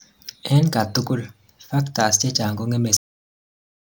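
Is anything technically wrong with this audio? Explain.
Yes. The speech has a cut-off end at 2.97 s: the sound stops mid-utterance and falls straight to digital silence, with no decay. The final buffers were never written or played. On a waveform the signal ends abruptly in a flat line, and a spectrogram shows energy ending sharply across all frequencies.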